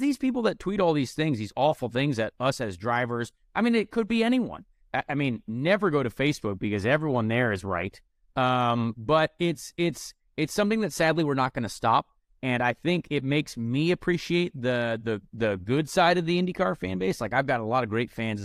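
Speech recording, no technical faults heard anywhere in the clip.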